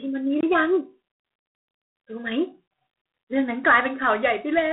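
G.726 ADPCM coding runs through the whole of this speech recording. Each sample is sent only as a few bits of difference from an adaptive prediction, and the coarseness here points to the 24 kbit/s mode. That leaves a harsh, rasping hiss that rises and falls with the speech level. The sound sits in a telephone band of roughly 150 Hz to 3.5 kHz, with nothing above 3.9 kHz. A block of digital silence cuts in from 0.41 to 0.43 s. For about 23 ms the sound drops out and then resumes, with no fade at either edge, leaving a brief hole. The length fits a 1024-sample buffer that the program failed to fill in time.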